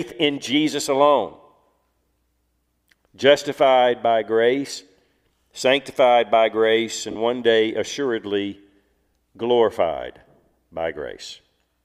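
At about 7.11 s there's a burst of lost LE Audio frames, running to roughly 7.16 s, around 45 ms, which fits six dropped frames. The LC3 decoder papers over the gap by reusing the last spectrum with scrambled signs, so the sound briefly smears into noise.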